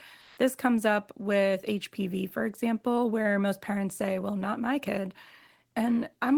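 From 0.23 to 0.35 s, for about 120 ms, there is comfort noise in place of the background. The real background sits about 42 dB below the loudest speech. In this gap it gives way to a flat, featureless hiss, about 5 dB off the surrounding level. The likely cause is discontinuous transmission, as in Opus DTX. The sender goes quiet when no speech is detected. The receiver then fills the pause with synthetic noise.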